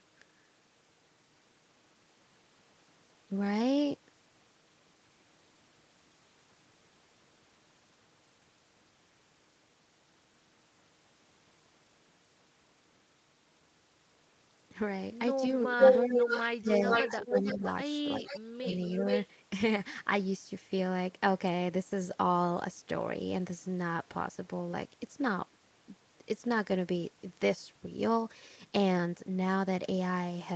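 Speech recorded through a call path, with trouble concentrated between 15.63 and 19.27 s. The first fault is an echo leak, likely from a far-end loudspeaker whose echo canceller let its microphone pickup return. A copy of the speech comes back about 450 to 465 ms late, at 15.63 to 16.44 s (louder than the direct speech), 16.9 to 17.73 s (roughly level with it), 18.27 to 18.77 s (quieter) and 19.09 to 19.27 s (level again). On a spectrogram, each stretch shows the harmonic and formant pattern repeated a little under half a second later, overlapping the live speech beneath the Opus band edge at 8 kHz. The second fault is speech suppressed in double talk, likely because the canceller could not separate the talker from that returning echo and turned both down. From 15.69 to 17.65 s, about a second in total is pulled down, by roughly 15 dB at worst. From 18.17 to 18.66 s, a shorter stretch of under half a second drops by roughly 35 dB, close to silence. 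The waveform shows abrupt dents in the envelope there, and the spectrogram shows those columns going dark.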